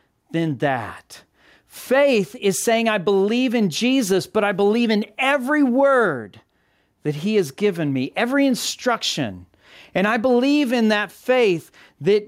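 Gain pumping runs through the whole speech clip: the gain ducks by about 5 dB under every loud syllable, likely from input gain set far too high with a fast limiter clamping it. The waveform looks flattened, its envelope dipping and recovering with each phrase.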